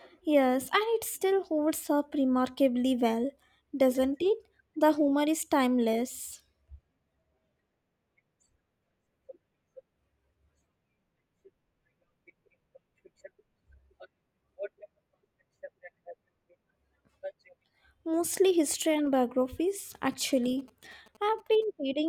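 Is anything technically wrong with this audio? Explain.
Yes. From 20.12 to 21.64 s, just after "history and biographies", GSM signalling bursts appear: a nearby 2G phone's radio bursts get rectified in the audio circuitry, adding galloping ticks and 217 Hz buzzing about 30 dB below the speech.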